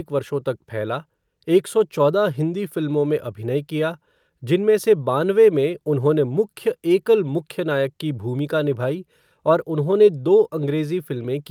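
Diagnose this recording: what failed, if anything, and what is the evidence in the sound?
Nothing failed: the speech shows no audible defect at any stage from capture through playback, so there is no fault to trace.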